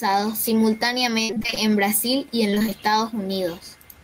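From 1.23 to 1.58 s, and again from 2.50 to 2.73 s, the speech turns choppy and robotic: repeated packet loss, with rapid short holes (up to 55 ms, then 21 ms) patched by stretching the preceding sound, covering about half of each stretch.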